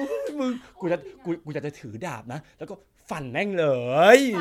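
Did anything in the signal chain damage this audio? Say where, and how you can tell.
No, nothing along the chain seems to have hurt this speech, so there's no stage to point a finger at.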